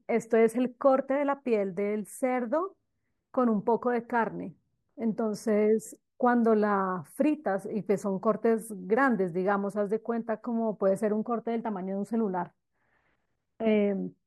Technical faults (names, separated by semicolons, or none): none